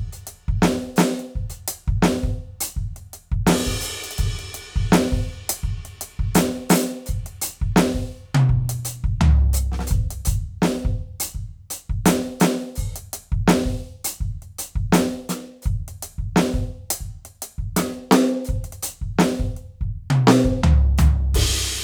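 Listening to the music, I heard nothing out of the ordinary at any point.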